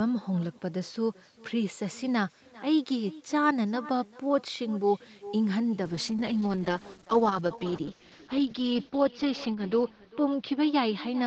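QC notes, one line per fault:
Throughout, echo with no canceller: every phrase is trailed by a quieter, thinner copy about 400 ms later, sitting about 20 dB below the speech. The far end's loudspeaker feeds its microphone and nothing subtracts it. Unlike room reverberation, the copy is a distinct repeat, not a smooth decay.
5.84 to 11.27 s, call bitrate drop: from 5.84 s the speech turns rough and watery as the Opus encoder is squeezed from 48 kbps down to 8 kbps, staying at the floor for about 3.5 s. With far fewer bits, the coding gets coarse and the top end is shaved. It differs from plain filtering because the texture degrades along with the bandwidth.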